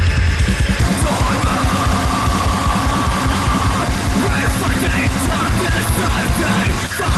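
From 6.87 to 7.00 s, a jitter buffer speed-up trims about 40 ms of backlog in pitch-period slices, so the sound briefly runs about 25% faster at unchanged pitch, hurried.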